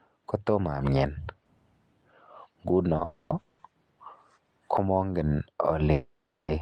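Speech with call audio freeze at 3.04–3.32, 3.40–3.61 and 5.92–6.50 s: fading buzzy smears, flat horizontal spectrogram bands, likely jitter-buffer underruns, after which speech resumes late but intact.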